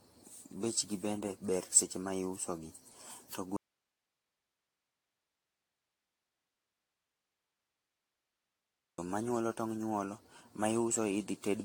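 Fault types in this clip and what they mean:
generation loss: The speech sounds swirly, smeared and hollow throughout, with blurred attacks and nothing above 18.6 kHz. This likely comes from around ten rounds of AAC-LC encoding at 96 kbit/s, each pass requantising on a shifted frame grid so the damage accumulates.
audio dropout to a faint residue: At 3.57 s the speech cuts off abruptly to plain hiss about 55 dB below its normal level. It resumes mid-flow at 8.98 s, leaving a 5.4 s gap. The likely cause is a lost source while the downstream path stayed live.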